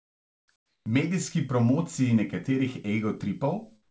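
From 0.00 to 0.48 s, 0.56 to 0.86 s and 3.82 to 3.90 s, the real background drops out and a steady, featureless hiss takes its place: comfort noise in place of the background. Its level sits about 27 dB, 11 dB and 7 dB below the original respectively, so the first gap sounds nearly dead. The likely cause is discontinuous transmission, with the receiver synthesising shaped noise while no sound was sent. Throughout, nothing is heard above 8 kHz.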